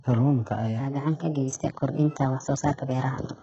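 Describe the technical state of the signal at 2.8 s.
At 2.8 s the speech is still inside a section at the wrong speed, running from 0.8 s to the end. It plays about 1.22 times too fast, likely from a clock mismatch, so pitch rises roughly three semitones and delivery sounds hurried; a spectrogram shows harmonics spaced wider and syllables compressed in time.

Throughout, including here, heavy HE-AAC compression is likely: the spectrum stops dead at 7.9 kHz, and the rebuilt treble below it sounds gritty and lispy on s sounds. The damage points to a very low bitrate around 8 kbps, and a spectrogram shows blocky, smeared upper bands.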